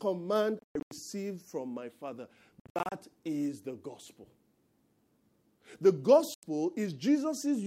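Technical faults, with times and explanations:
0.59–0.91 s: Bluetooth dropout. Abrupt silences totalling about 250 ms, longest 116 ms; speech resumes later as though it had played on, likely from late-dropped wireless packets.
2.60–2.92 s: Bluetooth dropout. Scattered hard-edged gaps totalling about 200 ms, longest 58 ms; the missing stretches are skipped, not delayed, likely from packets lost over the link.
6.34–6.43 s: Bluetooth dropout. A single clean-edged gap of about 87 ms; speech picks up mid-flow afterwards, likely because packets reached the headphones too late.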